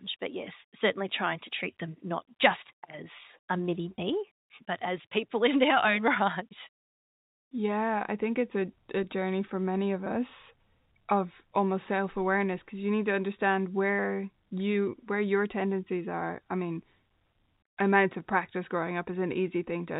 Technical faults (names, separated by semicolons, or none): packet loss with pitch repetition